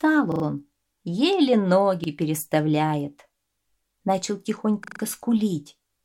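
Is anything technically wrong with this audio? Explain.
Yes. Short stutters at 0.32–0.44 s, 2.04–2.08 s and 4.84–5.0 s are a repeated buffer: when fresh data arrived late, the same 40 ms piece replayed three, one and four times, with hard joins.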